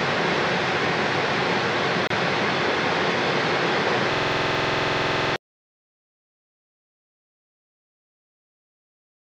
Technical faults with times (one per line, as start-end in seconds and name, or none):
2.07-2.10 gap at a join of encoded pieces
4.13-5.34 system hang loop